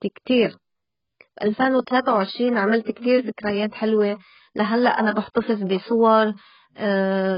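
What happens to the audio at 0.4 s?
At 0.4 s the speech sounds dull and smeared, with nothing above about 5.1 kHz and a warbly, fizzy edge on sibilants. It lasts the whole clip, likely AAC compression, where a starved bit budget (fitting roughly 12 kbps AAC-LC) forces a low cut-off and coarse quantisation.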